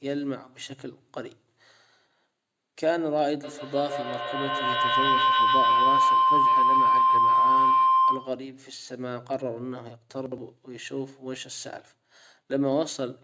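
Feedback howl runs from 3.43 to 8.52 s. A microphone and a loudspeaker sharing the room on the same call form a loop, and each trip around it adds level, so the repeats grow instead of dying away. They narrow to a tone around 1 kHz, and the loop's round-trip delay is roughly 150 ms. It climbs to about 7 dB above the speech and persists until the loop breaks at 8.52 s.

Chunks out of order occur at 10.26 to 10.38 s. A 60 ms chunk of audio arrived or was written one chunk late, so it plays after the chunk that should follow it. Nothing goes missing, but the sequence is swapped and three hard joins result. The moment sounds briefly jumbled. Throughout, the call's microphone processing trims the lowest bass, and nothing is present above 8 kHz.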